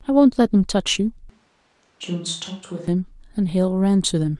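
From 1.30 to 2.88 s the speech turns abruptly roomy and hollow, thinner in the bass and roughly 5 dB quieter, with background noise rising to about 35 dB below the speech. This is likely a switch to a distant microphone, not a simple gain dip, because of the sudden room tone.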